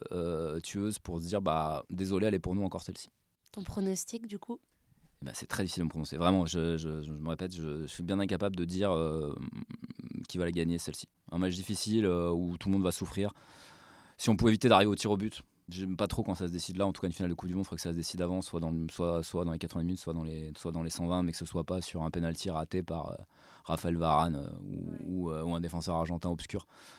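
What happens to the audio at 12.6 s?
Nothing goes wrong at 12.6 s; the speech carries on intact through that moment with no dropout, glitch or other fault.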